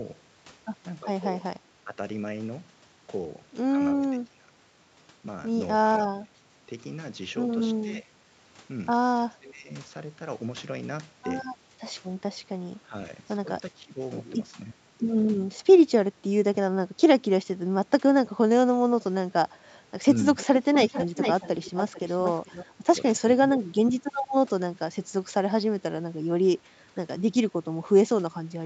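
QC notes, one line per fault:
1.04–1.98 s, 4.13–9.7 s, 11.72–15.56 s, 17.44–21.15 s and 22.83–26.98 s, speech suppressed in double talk: the speech dips in short patches, at worst about 20 dB down around 4–10 s, likely the echo canceller turning everything down while the other side talked.
20.37–22.66 s, echo leak: a delayed copy of the speech comes back 443 ms late and only about 5 dB below it, likely loudspeaker pickup the far end's canceller didn't fully remove.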